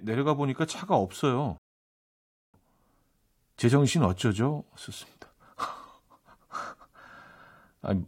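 A speech clip with a rebuffering stall. At 1.58 s the audio drops to silence. It resumes at 2.54 s, picking up exactly where it stopped. No speech is lost, but about 0.96 s is added. The player ran out of downloaded audio and waited for more.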